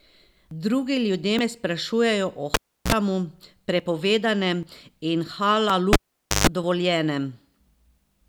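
Dropped buffers (overruns) are the likely cause of the skips at 0.51 s and 1.39 s. At each, the speech jumps forward with no gap, as though a short stretch were cut out: roughly 70 ms at the first and 40 ms at the second. Incoming audio was overwritten before the software collected it, so the surviving sound on either side is butted together. The same skip returns at 3.80, 4.63, 5.70, 6.64 and 7.68 s. Most are around 40 ms, the one at 5.70 s is shorter at about 20 ms, and the one at 7.68 s is longer at about 70 ms.

A cable pulled and plugged back in runs from 2.54 to 2.92 s. A pop is followed by about 330 ms of near silence, then roughly 44 ms of 60 Hz mains buzz as only the plug tip makes contact, and a second pop when the signal returns. A longer unplug spans 5.93 to 6.47 s, with about 490 ms of dropout and a 136 ms burst of 50 Hz buzz before the closing pop.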